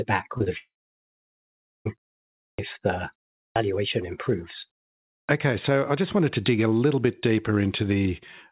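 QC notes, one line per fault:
0.38–0.42 s and 0.44–0.48 s, short concealed packet loss: two roughly 20 ms gaps in the call stream, each bridged by the receiver, which extended the preceding sound for about 19 ms before crossfading back into real audio. The result is a quick smear or slight wobble rather than a hard gap. On a spectrogram, the preceding sound's pattern continues unnaturally smooth across each patch. The waveform shows a segment where the natural variation briefly stops.
0.58–1.87 s, long network dropout: about 1.28 s of audio is missing, likely lost in transit on the network. The receiver first stretches the last sound into a short buzz or hiss that decays quickly, then gives way to about 1.17 s of silence before the stream resumes, with the lost portion simply gone. A spectrogram shows a brief fading smear followed by an empty band across all frequencies, band-limited below 4 kHz as with the G.711 path. 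The waveform flattens to near zero.
2.51–2.59 s, 3.49–3.56 s and 5.22–5.29 s, clipped start after a pause: each follows a gap of 0.58 s, 0.39 s and 0.57 s respectively. The output device, idle during the pause, takes time to wake and swallows the first 73 ms, 66 ms and 67 ms of the next onset, so the sound jumps in abruptly without its opening. On the waveform, the envelope starts abruptly with no rise. The spectrogram shows energy appearing as a sharp vertical edge, with the initial transient missing.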